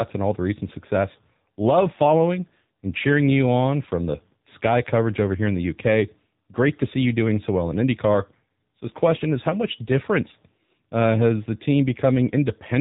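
From start to finish the speech sounds boxed-in and telephone-like, with a buzzy, synthetic edge on every voiced stretch and nothing audible above 4 kHz. That is the AMR narrowband mobile codec at work. AMR-NB samples at 8 kHz and rebuilds the voice from a vocal-tract model excited by a few pulses per 5 ms subframe. The damage is plainly audible, which fits one of its lower rates, around 7.4 kbps.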